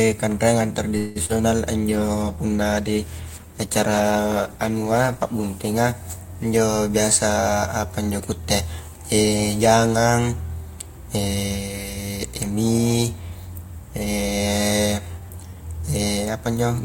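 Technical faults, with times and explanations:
0.97–1.18 s, call audio freeze: the speech stalls and the last sound is drawn out as a fading buzz for about 0.18 s. It never drops to silence. Then the speech resumes exactly where it stopped, so nothing is lost but everything after it arrives later. The likely cause is delayed packets draining the jitter buffer. On a spectrogram, the final spectral shape smears sideways and decays. The waveform shows a tapering, repetitive stretch.
1.26–1.38 s, short concealed packet loss: about 40 ms of audio never reached the decoder. The receiver bridged the hole with roughly 36 ms of synthesized continuation, extrapolating pitch where the sound was voiced and using shaped noise otherwise, then crossfaded back. The result is a brief smear or wobble. On a spectrogram, the harmonics flatten into a short uniform patch. In the waveform, a few cycles repeat too regularly before the real signal returns.
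1.91–5.82 s, call bitrate drop: the encoder rate fell from 64 kbps to 18 kbps and stayed at the floor for about 3.8 s, after the bandwidth estimate collapsed. Coarser coding makes the speech rough and watery, and the top of the spectrum is trimmed, so it also sounds muffled. A spectrogram shows the upper band abruptly emptied, with blotchy, quantized texture below. The waveform looks much the same, because the damage is spectral rather than in level.
6.46–6.90 s and 12.35–13.31 s, jitter buffer speed-up: the buffer held more than its target, so the receiver repeatedly cut out pitch-period-sized slices. The first stretch, just before "biasa apa injo kuitte", runs at about 111% with roughly 50 ms removed. The second runs at about 108% with roughly 100 ms removed. Pitch is unchanged but the delivery sounds hurried. On a spectrogram, syllables and gaps are compressed in time while harmonic spacing stays put. 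The waveform shows periods joined at splice points.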